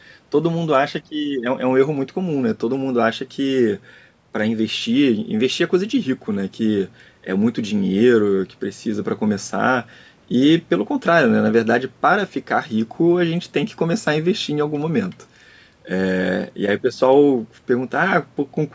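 No technical faults turn up anywhere in this speech, which has simply passed through ordinary call microphone processing.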